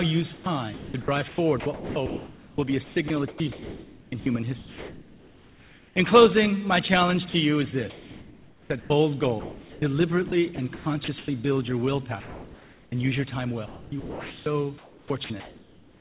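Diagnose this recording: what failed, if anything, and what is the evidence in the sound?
Call processing, the sender's voice activity detection: sound chopped by the voice detector from 0.34 to 5.96 s, 7.9 to 11.28 s and 13.66 s to the end. The detector likely kept gating transmission on and off, so about 3.6, 1.6 and 1.7 s of sound became comfort noise, leaving choppy passages with a background flickering between real and synthetic.

Same stage: sound dropped by the voice detector at 7.3 to 7.34 s. A quiet stretch was likely judged to be background and not sent, so 40 ms of sound gives way to steady noise before returning when the detector retriggers.

Discontinuous transmission: comfort noise in place of the background from 12.2 to 12.92 s. The sender likely paused transmission, and the receiver generated synthetic noise, so the real background, sitting about 25 dB below the loud parts, becomes a featureless hiss about 3 dB quieter for 0.72 s.

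Detector onset lag: onset clipped by the voice detector at 12.89 to 12.92 s. The detector was likely slow to notice returning sound, so the first 30 ms went unsent and the sound starts abruptly out of the comfort noise, over a call path band-limited to 4 kHz, which fits G.711 at 64 kbps.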